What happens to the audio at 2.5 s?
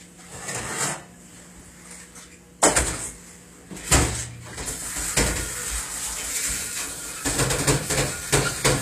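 At 2.5 s, as throughout, nothing sounds above 14.9 kHz, and smeared low-bitrate artefacts persist. This is likely low-bitrate audio saved at a high bitrate, not a clean high-bitrate encode.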